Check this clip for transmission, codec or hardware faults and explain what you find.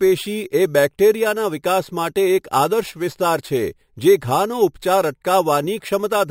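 There's one fault, and it runs through the whole speech clip: imaging from sample-and-hold upsampling. The sound seems to have been stepped up in rate by simply holding each sample, which fits a 12 kHz original raised to 48 kHz. With no smoothing filter, a mirrored copy of the spectrum lands between 6 kHz and 12 kHz, about 20 dB below the speech. You hear it as a metallic fizz riding on the speech that swells with loudness and drifts opposite to its pitch.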